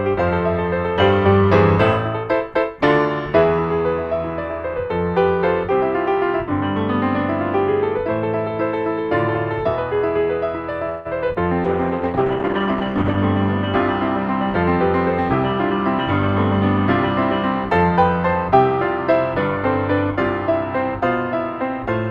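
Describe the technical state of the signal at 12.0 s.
At 12.0 s the sound is coarse, watery and dulled at the top end, inside a call bitrate drop running from 11.66 to 13.24 s. The encoder's rate fell from 64 to 13 kbps, holding there for about 1.5 s, forcing coarser coding and a narrower band.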